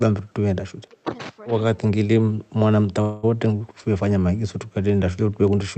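It's a speech clip where the talker dips sharply, by up to about 20 dB, at 0.82–1.13, 2.31–2.54, 3.66–3.85 and 4.37–4.50 s, speech suppressed in double talk, likely as the echo canceller ducks both sides. At 3.01–3.37 s there's a call audio freeze: about 217 ms of fading fill and then a seamless resume, likely a starved jitter buffer, with nothing lost.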